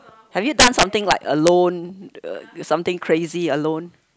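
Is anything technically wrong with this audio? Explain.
Yes. From 0.6 to 1.48 s the speech breaks into violent cracks on loud peaks, sharper than clipping: integer overflow, where about 9 dB overdrive wraps peaks to the opposite sign instead of limiting.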